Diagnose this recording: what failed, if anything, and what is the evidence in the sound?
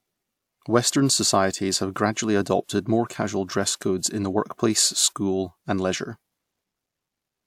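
Nothing failed; no audible fault in this speech recording.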